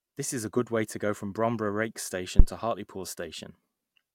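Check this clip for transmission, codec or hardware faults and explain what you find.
One hardware fault is present in the speech. From 2.39 to 2.47 s there is a phantom power thump. A supply switching on a live input sends a voltage step through the coupling capacitors, producing a deep thud that peaks at about -2 dBFS and dies away within 16 ms. A plosive or handling bump follows the talker's breath or movement. This is a single abrupt electrical step with a smooth, rapid decay.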